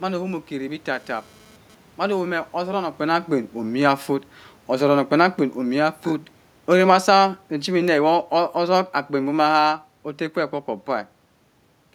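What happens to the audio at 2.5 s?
Nothing goes wrong at 2.5 s: the speech runs on intact there, with only the room's own background noise underneath it.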